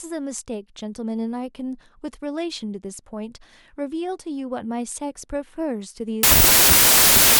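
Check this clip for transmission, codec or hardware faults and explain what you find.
One fault is present: a wrong sample width from 6.23 s to the end. The sound points to packed 24-bit samples read as 32-bit. Mismatched bytes produce loud noise burying the speech, running about 1.33 times too fast and high.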